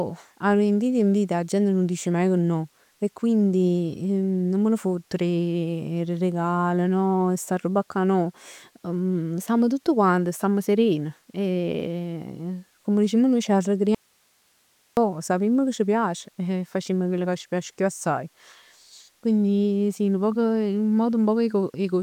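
Speech that is abruptly lost from 13.95 s to 14.97 s, an audio dropout to a faint residue lasting about 1.02 s. During the gap only hiss remains, roughly 40 dB below the speech level. The cause is likely a signal break upstream while the path after it stayed live. On a waveform the envelope drops to a thin noise band with hard edges at both ends, and a spectrogram shows a flat, broadband hiss strip where the speech harmonics vanish.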